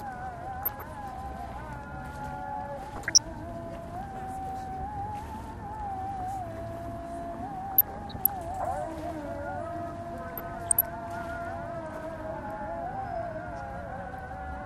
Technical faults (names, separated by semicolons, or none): MP2 compression; DAB burbling